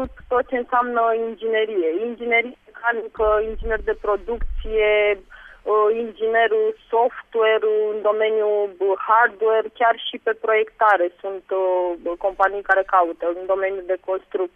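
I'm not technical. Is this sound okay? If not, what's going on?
Yes, this sound is okay, and there's nothing going on that needs fixing.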